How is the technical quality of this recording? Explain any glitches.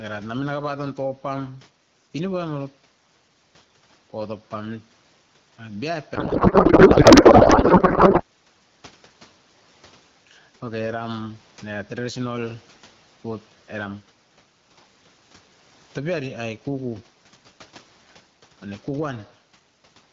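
The recording has two glitches: level pumping throughout, and a garbled stretch where the codec's frames are misread.

Gain pumping runs throughout. The level swings by around 5 dB, pulling loud and soft parts closer together, likely from excessive gain and a fast limiter. On a waveform, the level rises and dips in step with the speech envelope.

A codec payload misread occurs from 6.15 to 8.23 s. The speech turns into warbling, garbled noise, which points to octet-aligned AMR frames being decoded as bandwidth-efficient. A spectrogram shows smeared, structureless energy in place of harmonics.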